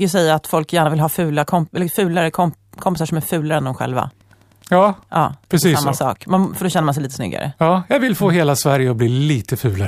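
From about 3.68 s, right after "som är fulare än", there's Wi-Fi interference running until 6.79 s, just before "man sig lite snyggare". A Wi-Fi radio sitting near the audio circuitry is getting rectified, and its beacon, firing every 102.4 ms, comes through as a steady tick roughly ten times a second. It's quiet, somewhere around 40 dB under the speech.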